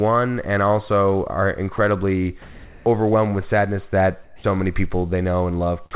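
At 1.76 s, right after "and also are", a 20 ms sliver of speech is swapped for flat noise. This is sound dropped by the voice detector, likely because it misread the sound as background and briefly stopped sending. The gap cuts into the speech itself, unlike comfort noise, which fills only pauses. The same tiny bite recurs at 5.91 s, clipping the very end of the audio.

From 2.42 to 2.86 s, just before "overwhelmed with sadness", the pause is filled with comfort noise in place of the background. The sender likely went silent during the pause, and the receiver substituted a steady, textureless hiss, about 6 dB louder than the real background. After that phrase, from 4.24 to 4.44 s, it happens again, this time about 7 dB quieter. The speech stays intact in both; what gives them away is the level step and the flat texture of the noise. Throughout, the narrowband call path leaves nothing above 4 kHz.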